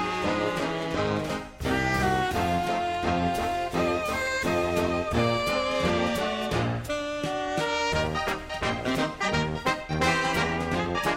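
Dropped samples, at 4.27 s and again at 8.06 s: two sharp single clicks, each likely from a handful of missing samples, a tenth of a millisecond, making the waveform jump abruptly.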